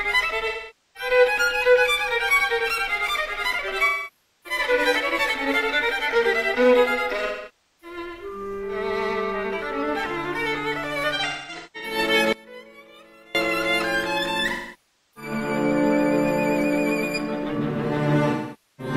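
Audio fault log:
0.48–1.10 s, 3.85–4.60 s, 7.26–7.97 s, 11.15–11.98 s, 14.51–15.31 s, 18.31–18.94 s: AAC frame loss with concealment. The decoder bridges 0.47–0.64 s gaps by repeating the last spectrum, so the audio smears and turns noisy and phasey rather than cutting cleanly. At 11.15 s the losses are scattered, with the longest run about 0.2 s.
12.33–13.35 s: one channel inverted, likely. The level drops by about 27 dB, leaving a faint residue instead of silence. The anti-phase channels cancel their shared content and leave only their difference, unlike a dropout or the smeared concealment gaps.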